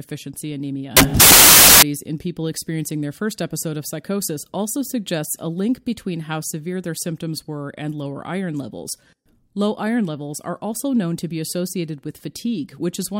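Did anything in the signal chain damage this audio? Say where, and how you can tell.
Yes. From 0.97 to 1.82 s the speech is swamped by a burst of loud, harsh broadband noise. That points to the sample-format conversion stage: samples built from the wrong bytes. The bytes making up each sample were assembled out of order or misaligned, so the rapidly fluctuating low-order bits landed in the high-order position and turned into noise.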